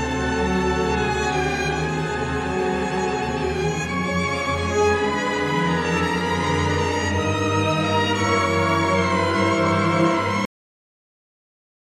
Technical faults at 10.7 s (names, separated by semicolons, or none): cut-off end